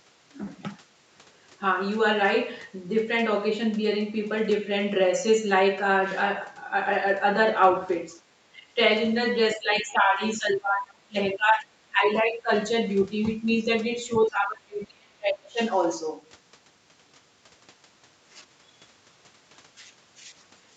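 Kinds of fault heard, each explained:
Speech suppressed in double talk: between 8.4 and 15.6 s the talker's sound dips by roughly 15 to 35 dB, appearing as waveform gaps and faded spectrogram patches, likely from echo-canceller ducking.
Other side's voice leaking through: near 13.5 s a brief faint scrap, about 30 dB below the speech, shows as a barely visible spectrogram smudge, likely residual loudspeaker echo.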